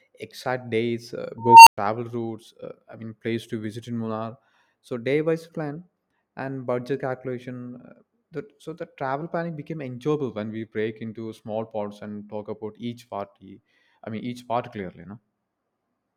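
At 1.38 s an unstable filter produces a tone around 1 kHz that swells over 287 ms into clipping, then 109 ms of silence, a flat-lined waveform gap, ending at 1.78 s.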